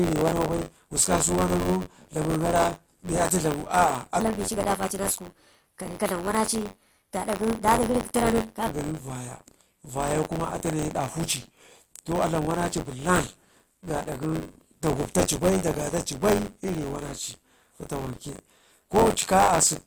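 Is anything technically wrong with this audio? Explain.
Yes, two faults. Buffer tearing runs throughout. Writer and hardware have slipped, so roughly 15% of each buffer replays audio about 30 ms old. This gives a rattling buzz near 94 Hz, which fits a 512-sample buffer.

From 4.20 to 8.68 s, a section plays at the wrong speed, 1.25 times too fast. Pitch rises about four semitones, sounding hurried and high. It was likely fitted to the wrong clock.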